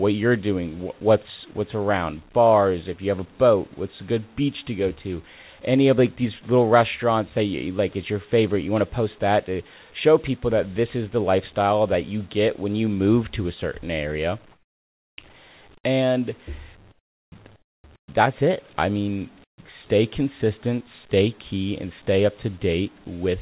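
A speech clip carried over a phone-style call path, where nothing gets above 4 kHz, which fits G.711 A-law. The real fault is comfort noise in place of the background. In the pauses at 14.52–15.18, 16.92–17.32, 17.56–17.84, 17.96–18.08 and 19.44–19.58 s, the background drops by about 14 to 20 dB into a smoother, featureless noise. That's likely the sender going quiet between phrases, with the receiver patching the gap with synthetic noise.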